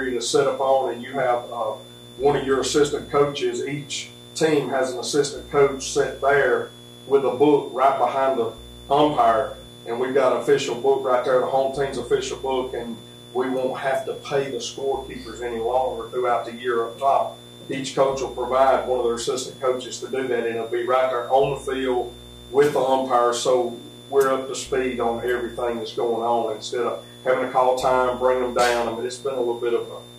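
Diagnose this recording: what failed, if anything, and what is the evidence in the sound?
Switching supply whistle, analogue power stage. A high tone drifts between 3.4 and 3.7 kHz throughout, roughly 25 dB below the audio. A switching regulator is whining audibly.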